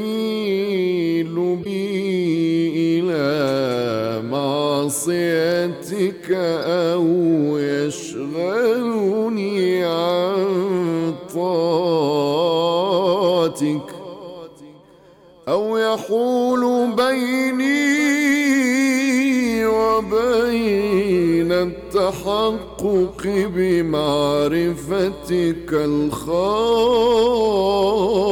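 At 1.61 s a brief glitch cuts into the sound for about 0.05 s, ending at 1.66 s. A second, shorter blip follows at 6.62 s. Both are damaged data in a compressed stream. Some bytes in the coded stream were lost or overwritten. The decoder could not read those frames properly and lost its place. It then hunted for the next valid frame header. Each spot comes out as a short chirp, squawk, click or hole.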